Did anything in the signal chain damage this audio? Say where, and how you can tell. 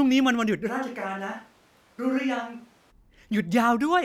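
Yes. From 0.70 to 2.90 s the speech suddenly goes roomy and hollow, thinner in the bass and roughly 5 dB quieter, with room noise coming up to around 30 dB under the speech. That's a switch to a distant microphone at the capture stage, likely a close-mic dropout.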